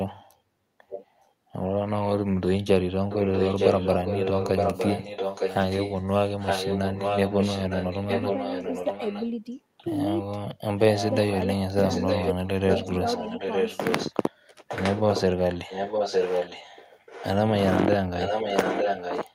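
A far-end echo canceller likely let its loudspeaker pickup through, so an echo leak returns the speech about 910 ms late: faintly, about 15 dB down, at 0.89–1.28 s, then only about 5 dB down at 3.09–9.84, 10.78–14.14, 14.68–17.28 s and from 18.16 s to the end. Between 11.55 and 12.63 s, speech is suppressed in double talk because the canceller likely mistook overlapping talk for echo, cutting roughly 0.4 s in total by as much as about 40 dB.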